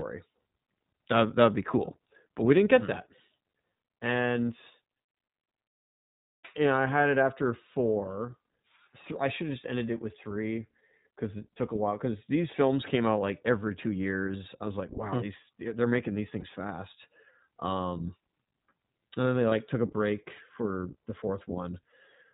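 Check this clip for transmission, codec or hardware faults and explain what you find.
Two faults are audible: a narrowband codec throughout, and four short dropouts.

The iLBC codec colours the whole clip. Nothing above 4 kHz survives. Each short block is coded on its own. The speech sounds clear but a little rough and synthetic. The damage is plain, and it fits the 15.2 kbps mode with 20 ms frames.

Lost iLBC frames occur at 5.16 to 5.18 s, 14.22 to 14.25 s, 16.40 to 16.45 s and 19.50 to 19.53 s. Each gap matches about one 20 ms frame. The decoder fills it by repeating the last pitch cycle mixed with noise. This gives a brief held, buzzy vowel. The voice is right again almost at once.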